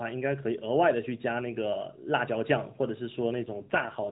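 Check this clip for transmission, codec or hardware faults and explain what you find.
One transmission fault is present, an AMR rate drop near the end of this speech clip, which is carried over the AMR narrowband mobile codec with its 4 kHz ceiling.

AMR rate drop, 3.46 s to the end: the network pushes the codec to a lower rate for error protection. The speech turns rougher and buzzier, consistent with a fall from 12.2 to 5.9 kbps. On a spectrogram the band and waveform stay continuous, but the harmonics blur.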